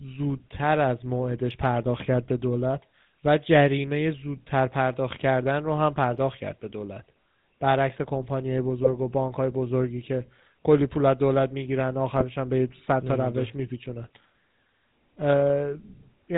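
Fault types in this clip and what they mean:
GSM full-rate codec: The speech passes through the original GSM vocoder for its full length, and the damage is plainly audible. The codec rebuilds each segment from a vocal-tract filter excited by a decimated pulse train, so voicing takes on a buzzy, gravelly grain and nothing above 4 kHz survives. The resulting dull, rasping texture fits the 13 kbps full-rate mode rather than a cleaner later GSM codec.
GSM bit errors: Two short bursts occur where corrupted bits evidently reached the decoder, one from 8.84 to 8.91 s and a longer one from 12.12 to 12.23 s. When the received filter, pitch or gain parameters are wrong, the decoder synthesizes the wrong spectrum or level frame after frame, four frames in the first burst and five in the second. Here that produces brief squawking, popping and gargled distortion. The second burst is the longer of the two.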